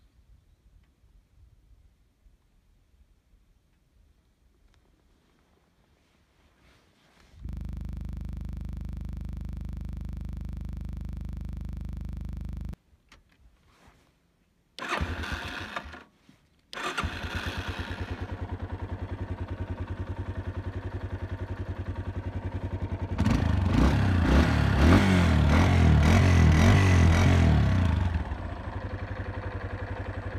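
From 7.49 s to 12.74 s the audio collapses into a rapid, rigid rattle: one 40 ms fragment repeats identically, about 131 times, giving a mechanical buzz pulsing at 25 Hz. This is a system hang loop. The host or its audio driver stopped supplying new samples, but the playback hardware kept reading the same small ring buffer over and over, so the last captured slice cycles exactly until the system recovers.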